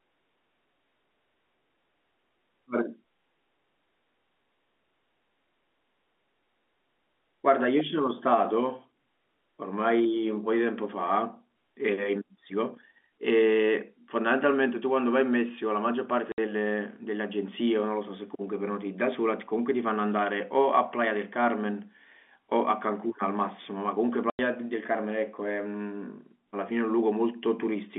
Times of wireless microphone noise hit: none

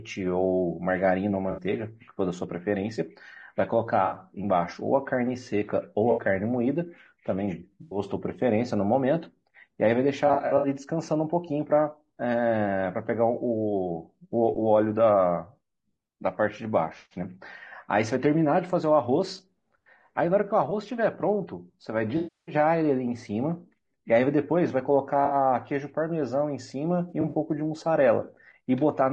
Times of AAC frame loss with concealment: 1.51-1.61, 4.05-4.15, 6.11-6.21, 7.81-7.99, 10.27-10.67, 22.17-22.55, 25.25-25.35, 27.09-27.34

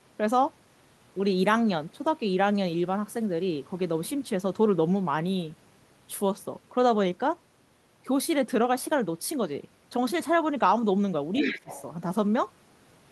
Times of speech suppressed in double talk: 11.41-11.68

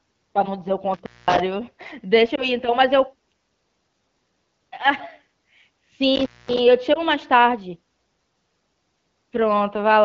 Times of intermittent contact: 0.94-1.40, 6.15-6.59

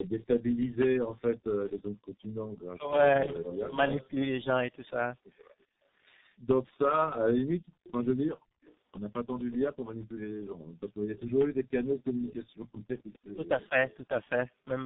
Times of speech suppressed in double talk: 2.65-2.98, 13.35-13.76

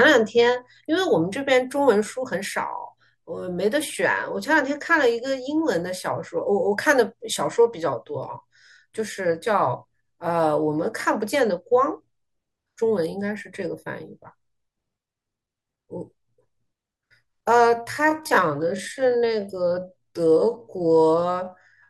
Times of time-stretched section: 17.72-21.89

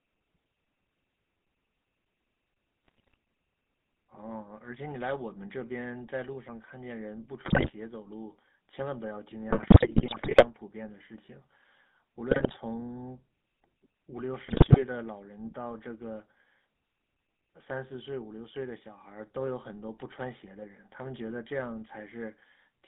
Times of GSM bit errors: 2.85-3.14, 7.44-7.72, 9.50-10.46, 12.30-12.56, 14.46-14.83

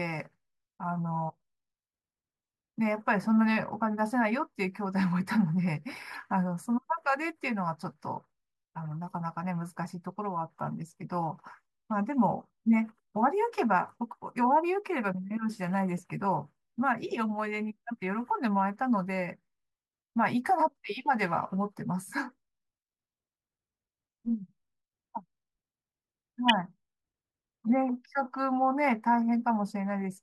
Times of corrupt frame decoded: 6.14, 26.48-26.52

